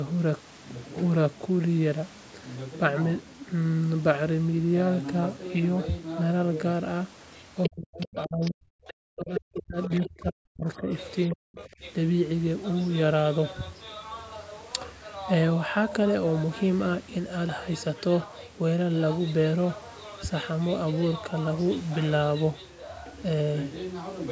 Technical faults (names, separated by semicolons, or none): other side's voice leaking through; speech suppressed in double talk